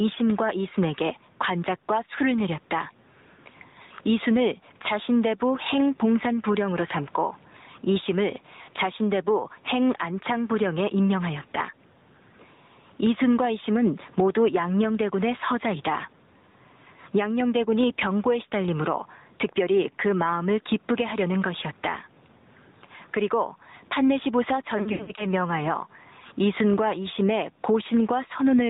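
From start to finish the level of the sound breathes. The room noise sits about 42 dB below the speech, and the gain swings by roughly 10 dB. This gain pumping likely comes from input gain set too high and a fast limiter clamping down on each loud syllable. The result is squashed dynamics. On a waveform the envelope looks flattened, with the noise floor visibly rising between phrases.

The whole clip is also band-limited and coloured by the AMR narrowband mobile codec. Nothing passes above 4 kHz, so a spectrogram shows a hard ceiling with empty space above it. The speech has a plainly audible buzzy, synthetic edge, and the background churns with a swirling, watery texture. The degree of damage fits a mid-rate AMR-NB mode of around 10 kbps.

At 8.62 s there are lost AMR speech frames. A 60 ms gap, which fits three 20 ms frames, is filled by the decoder repeating its last good pitch and vocal-tract settings at falling gain. 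It is heard as a short smeared dip. A spectrogram shows the harmonics held flat and fading briefly.

From 24.78 s to 25.26 s more frames drop out, 220 ms in total, scattered over about 400 ms, with the longest run 80 ms. The sound stutters, stretches and fades in patches, then comes back weak and rough. The waveform shows repeated level sags, and the spectrogram shows frozen, smeared bands.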